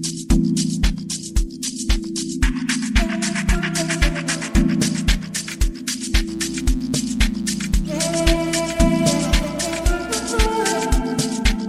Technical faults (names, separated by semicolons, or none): mains buzz